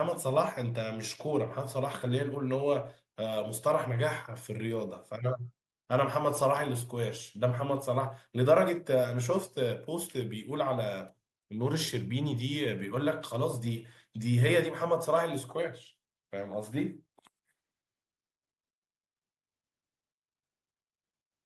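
Nothing in this speech recording stood out as a technical problem on listening.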